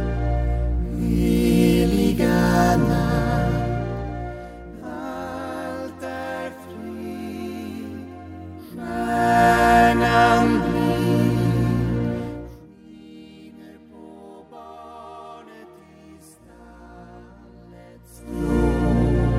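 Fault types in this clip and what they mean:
No technical faults are audible in this audio.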